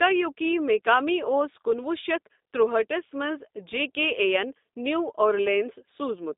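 The speech runs through a G.729 codec for its whole length, rebuilding the signal from a vocal tract model and sparse pulses at a rate that fits 8 kbit/s. Everything above 3.7 kHz and below 250 Hz is gone, leaving thin, plainly rough, faintly synthetic speech.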